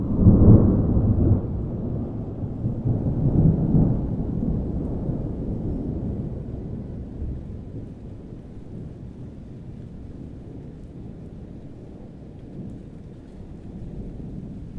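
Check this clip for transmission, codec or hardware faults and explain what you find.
There's one clear fault, right at the start.

From 0.0 to 2.81 s you get a wrong sample rate problem. The samples are being clocked out slower than they were captured, with no resampling, so everything runs at about 0.92 times normal speed and drops roughly 1.5 semitones. That ratio fits audio made at 24 kHz being played back at 22 kHz. It comes across as slightly dragging and low.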